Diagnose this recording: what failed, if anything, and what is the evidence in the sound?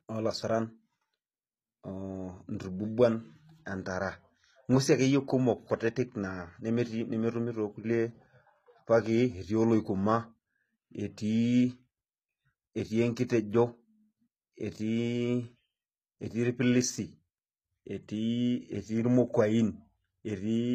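The codec stage likely applied HE-AAC compression at a bitrate fitting 20 kbps; throughout, replicated treble sounds gritty and nothing survives above 14.9 kHz.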